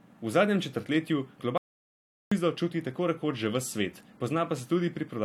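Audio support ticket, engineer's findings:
Audio dropout to silence, 1.58–2.32 s, right after "zadnjem četrtletju". Speech cuts mid-flow, 0.74 s lost, no room tone in the gap. Waveform shows a flat line; spectrogram a blank column across all bands. Likely input device or link loss while the recorder kept writing silence.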